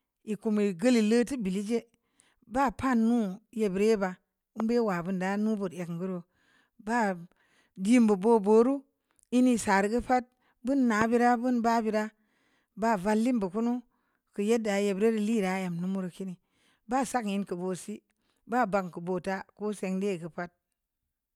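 A loud pop hits at 4.60 to 4.62 s, just before "bun da nu", and again at 11.01 to 11.04 s, before "bira bun ba", peaking about 10 dB and about 15 dB above the speech. Each is a single thump with the speech continuing underneath, unlike a dropout, most likely a voltage spike from a switch, plug or static discharge.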